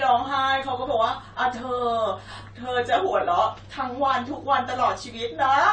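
Speech runs through the whole clip with AAC compression damage, likely from AAC-LC coding at a low bitrate, which fits something around 32 kbps. Nothing survives above 9 kHz, so the voice sounds dull, but a plain low-pass filter would stop there. What sets this apart is the plainly audible codec damage within the remaining band: the quantised spectrum leaves a smeared, unstable texture rather than a clean, merely darker tone.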